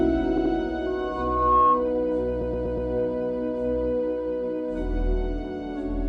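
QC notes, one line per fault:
0.37–0.53 s and 2.41–2.89 s, repeated frames: an 80 ms block plays twice more, then a 120 ms block four more times, adding 160 ms and 480 ms. The result is a mechanical stutter. On a spectrogram, identical slices repeat.
0.86–1.89 s, loudspeaker feedback squeal: a 1.1 kHz tone swells over roughly 0.7 s to about 10 dB above the sound, because the mic-to-speaker loop gain exceeds one there. On a spectrogram, a single bright horizontal line thickens and brightens.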